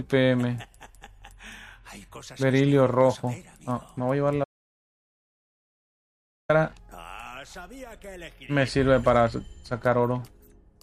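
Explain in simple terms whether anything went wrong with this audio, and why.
The audio input was likely cut off from 4.44 to 6.49 seconds, causing an audio dropout to silence: the sound stops abruptly, leaving 2.05 seconds of complete silence.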